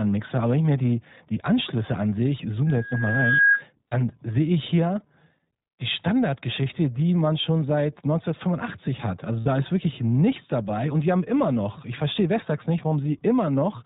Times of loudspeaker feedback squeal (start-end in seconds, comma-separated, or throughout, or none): 2.66-3.64